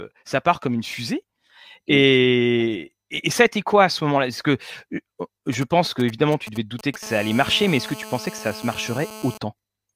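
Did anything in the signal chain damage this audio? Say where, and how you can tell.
Yes. Right after "que euh", from 5.53 to 7.03 s, GSM signalling bursts gallop in as ticks and short 217 Hz buzzes. A nearby phone's radio pulses get rectified in the analogue wiring, roughly 15 dB under the speech.

From 7.03 to 9.38 s it turns into steady GSM phone buzz, a raspy 217 Hz tone at about 16 dB below the speech. The phone has gone into a call, and the analogue stage keeps demodulating its bursts.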